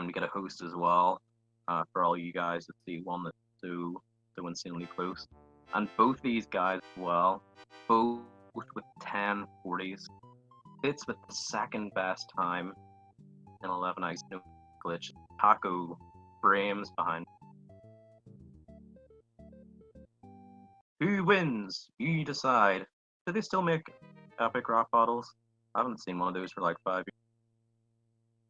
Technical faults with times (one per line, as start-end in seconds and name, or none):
none